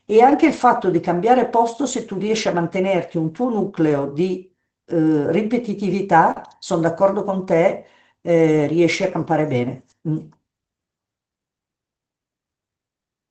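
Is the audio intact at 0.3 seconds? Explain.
No. A lost packet was rebuilt from error correction between 0.31 and 0.33 s. A 20 ms stretch, which fits one missing Opus packet, was replaced by the low-bitrate copy carried in the following packet. There is no gap, but that moment sounds rougher and noisier.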